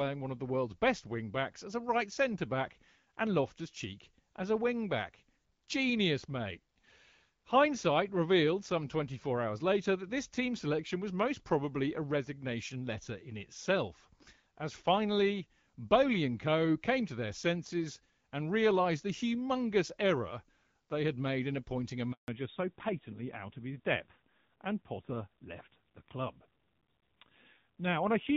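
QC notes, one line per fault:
22.12 to 22.28 s, handover gap: the sound dies away within a few tens of milliseconds and stays silent for 160 ms before resuming. While the call was being passed between networks, no speech frames reached the receiver, so that stretch is simply missing rather than muffled. On the waveform it shows as a short flat line with a quick fade at its start. On the spectrogram it is a clean vertical blank band across all frequencies.
22.28 s to end, fallback to narrowband: from the moment the sound returns, everything above 4 kHz is gone, and the speech turns duller and rougher. Before the gap the clear HD Voice character points to AMR-WB at around 12.65 kbit/s with only light coding damage. After the handover the sound points to a low-rate narrowband codec, something like AMR-NB at 7.4 kbit/s. On a spectrogram the upper energy stops abruptly at a flat ceiling near 4 kHz, a hard horizontal edge.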